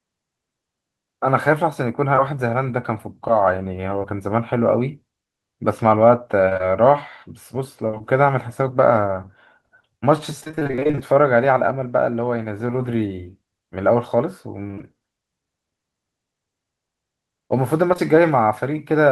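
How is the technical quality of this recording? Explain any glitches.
The recording has some network-related glitches: patched-over dropouts in three separate places.

From 2.15 to 10.99 s there are scattered short gaps, around thirty small holes, each roughly 20 ms or shorter, adding up to about half a second of missing audio. The receiver bridged each one by extending the preceding sound, so you get occasional quick ticks and tiny smears rather than real breaks.

Between 14.63 and 14.85 s there's a burst of repeated packet loss with a robotic sound. Six holes land in quick succession, the longest about 21 ms, and nearly half that stretch is filled in. Because the patches follow each other so closely, it comes across as choppy, with pieces missing.

Finally, at 17.93 to 18.00 s there are two back-to-back bits of short concealed packet loss, each a 20 ms hole. The decoder carried the last sound forward and blended back in, which gives a brief wobble or tick where a short consonant-like sound might just drop out.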